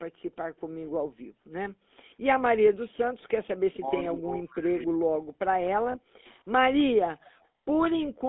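The whole clip carries the GSM full-rate codec's buzzy, gravelly roughness. The line band runs from roughly 250 Hz to 3.6 kHz, which fits 13 kbps GSM, and the damage is plainly audible. From 5.74 to 7.05 s the speech is pushed down in pieces, about 0.7 s in total and by up to about 40 dB. It sounds like speech suppressed in double talk, likely an echo canceller mistaking the talker for loudspeaker echo and turning both down. Inside that stretch, around 5.92 to 5.96 s, there's a short metallic ring where lost GSM frames were patched from the last good frame, which fits a single 20 ms frame going missing.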